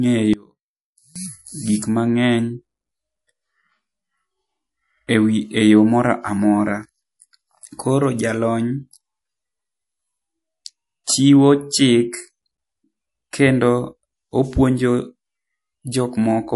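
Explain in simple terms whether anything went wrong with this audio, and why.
A few things went wrong. The whole clip has that watery, swirly edge, most likely from heavy MP3 compression squeezing the file too hard. From 0.34 to 1.16 s the speech nearly drops out, likely because one channel is inverted and cancels the other when the two are combined. At 11.04 to 11.07 s there's pre-echo: a short hiss sneaks in just before a sharp sound, because the encoder smeared its noise backward over that stretch.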